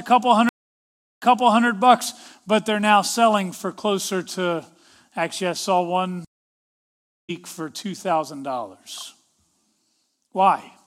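Twice the stream connection drops and the player reconnects with a new decoder, a stream reconnect each time. From 0.49 to 1.65 s the speech stops for 0.72 s and resumes 0.44 s earlier, repeating a moment. From 6.25 to 7.31 s a 1.04 s silence ends about half a second later, skipping speech.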